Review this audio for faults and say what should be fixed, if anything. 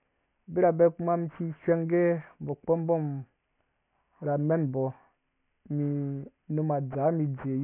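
Aliasing runs through the whole speech clip. Content that sat above 3 kHz has been folded back down below that point as gritty, unrelated tones, so sibilants sound metallic and the spectrum is packed right up to a hard edge at 3 kHz. The fold point suggests a downsample from 48 kHz to 6 kHz with no anti-alias filter, and the folded energy sits roughly 30 dB below the speech. To prevent this, low-pass filter below the new half-rate before reducing the sample rate, or use a proper resampler.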